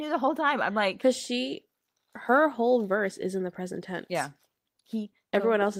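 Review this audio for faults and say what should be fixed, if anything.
Nothing in this speech recording needs fixing. No fault can be heard anywhere in it, so no repair or change to how it was captured is called for.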